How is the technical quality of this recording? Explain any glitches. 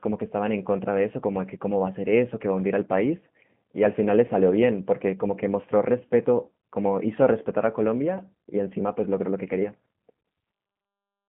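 Quality is limited by low-bitrate voice coding that runs through the whole recording. The G.729 codec is the cause. It does not store the waveform. It rebuilds the speech from a vocal tract model, a pitch predictor and a few pulses per short frame, at a rate that fits 8 kbit/s. The result is narrowband. Nothing above 3.5 kHz survives, and the line band sits at 150 Hz to 3.4 kHz. The damage is plainly audible. The speech sounds muffled, slightly rough and synthetic.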